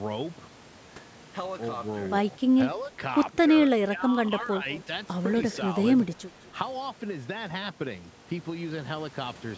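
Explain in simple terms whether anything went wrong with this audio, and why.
Two things went wrong, both in how a phone or video call handles sound from the other end.

The first is most likely speech suppressed in double talk. When both people talked at once, the call's echo canceller could not tell this talker apart from the other side's voice coming out of the loudspeaker, so it turned everything down. The speech dips slightly for a moment at 2.9 s and again from 3.45 to 3.55 s. It then drops much more noticeably from 3.8 to 4.18 s, sounding pulled back or partly cut away.

The second is most likely an echo leak. One side had the call on a loudspeaker, and its echo canceller did not fully remove what its microphone picked up, so a bit of the voice was sent back. You hear a faint, delayed copy of the speech, trailing about 0.2 s behind, in two short scraps, from 4.73 to 4.83 s and from 5.52 to 5.56 s.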